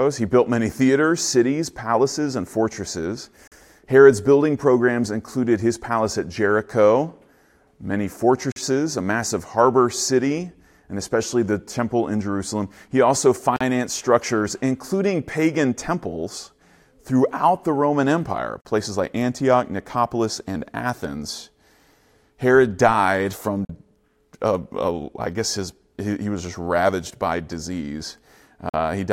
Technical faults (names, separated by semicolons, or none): gap between chunks